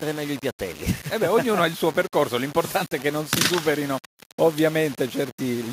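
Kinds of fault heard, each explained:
Low bit depth without dither: A grainy distortion rides on the sound throughout. It follows the signal and roughens quiet passages most. The error sits roughly 20 dB below the signal. This points to likely rounding to 5 bits without dither.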